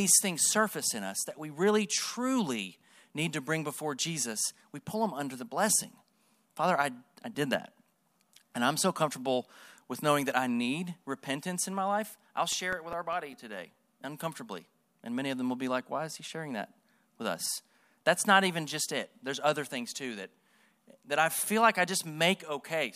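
CD scratch ticks appear in this speech from 7.15 to 8.56 s and again from 12.53 to 13.93 s, eight brief ticks each time, the longest only a few milliseconds. A blemish defeats error correction once per disc rotation, so the player patches or mutes those samples, giving a regular ticking of uneven strength.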